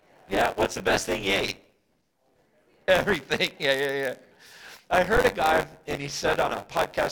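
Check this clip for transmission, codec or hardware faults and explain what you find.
The clip has one hardware-path fault running from start to finish.

Buffer tearing is present throughout the speech. The writing side and the reading side of the playback ring buffer have drifted until they cross inside each period. Around 15 percent of every buffer is stale audio from roughly 20 ms earlier, with abrupt splices at both edges. Those repeated splices produce a steady robotic buzz at about 93.8 Hz, which fits a 512-sample buffer. The buzz rides on the speech and goes quiet in the gaps.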